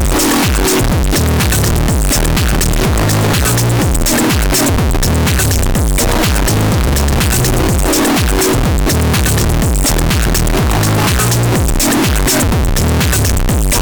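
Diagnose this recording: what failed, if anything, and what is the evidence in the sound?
Sample-format conversion failed: the whole recording is a float read as integer. Throughout the clip the sound is extremely loud and harsh, near-square at an almost fixed, high level, with background noise as loud as the foreground. This likely came from 32-bit float samples interpreted as 32-bit integers, so sign and exponent bits dominate each value.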